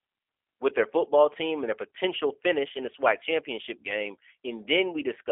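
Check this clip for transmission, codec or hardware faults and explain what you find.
One codec fault runs through the whole clip: G.729 coding. Throughout, the speech is rebuilt from a filter and sparse pulses, consistent with 8 kbit/s, giving rough, synthetic texture and no content above 3.5 kHz, unlike simple band-limiting, which stays smooth.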